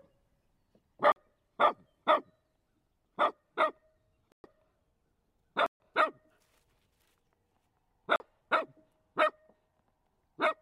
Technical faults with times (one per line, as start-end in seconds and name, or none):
1.12-1.16 block of digital silence
4.32-4.44 block of digital silence
5.66-5.80 block of digital silence
8.16-8.20 block of digital silence